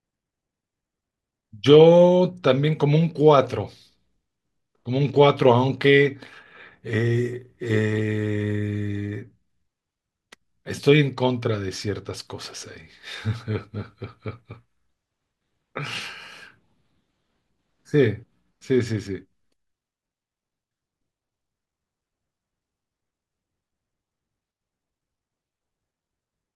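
Nothing in the speech stood out as a technical problem on listening.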